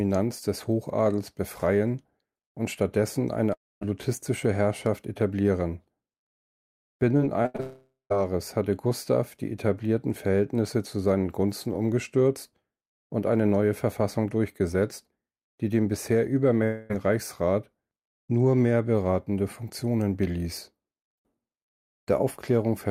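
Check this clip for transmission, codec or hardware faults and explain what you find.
The speech has two transmission faults: three network dropouts and one burst of repeated packet loss.

Long network dropout, at 3.53 to 3.83 s, 7.60 to 8.12 s and 16.64 to 16.91 s. The audio stops, and the last sound is stretched into a fading buzz. The likely cause is a network stall. The first two gaps settle into silence. The third is filled throughout.

Repeated packet loss (robotic sound), from 7.17 to 7.60 s. Four short holes open, the longest 80 ms. Each is patched by extending the previous sound, covering about a third of the span. The result is choppy, with pieces missing. It runs straight into the second dropout.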